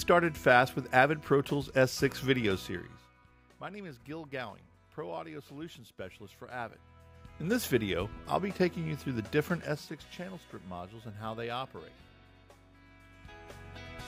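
A ticking, zipping texture rides on the sound from 9.47 to 10.03 s as it drops about 10 dB: zipper noise, from unsmoothed 2 dB level steps, roughly ten per second.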